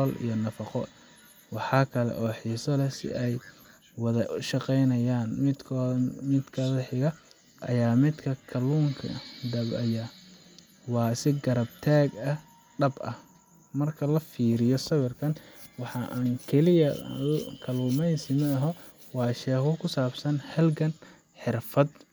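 A short stretch of speech, and there's nothing technically wrong to point to anywhere in it.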